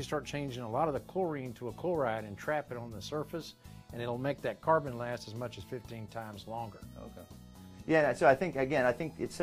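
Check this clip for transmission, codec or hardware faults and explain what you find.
No transmission, codec or hardware faults.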